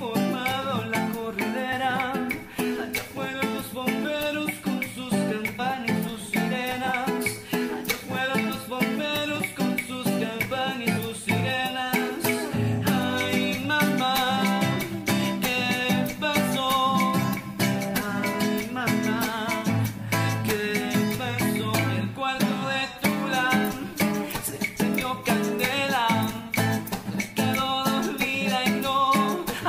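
At 1.71, 5.58, 6.86 and 10.96 s, compressed frames are skipped. Whole 26.1 ms frames (about two, two, three and one) never play, so the sound jumps ahead by roughly 50, 50, 70 and 30 ms.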